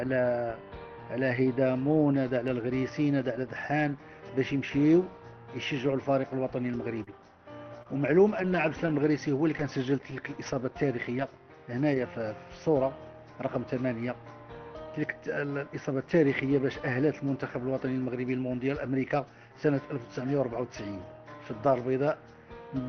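The audio comes through a call codec whose coding noise and roughly 6 kHz upper limit can be heard throughout. A short concealed packet loss occurs at 7.03 to 7.10 s. About 40 ms never arrived in time. The receiver continued the preceding sound to cover the gap, then blended back, so the moment smears briefly. A short stall from a late packet follows at 7.83 to 7.99 s. The jitter buffer ran dry when delay rose by 25 ms. The last sound is held slightly too long, adding about 7 ms, but nothing is lost. Nine lost packets rebuilt from error correction fall between 7.85 and 11.98 s, each 40 ms long. The decoder played the low-bitrate backup copies carried in the following packets. Those moments sound rougher and noisier, though there are no gaps.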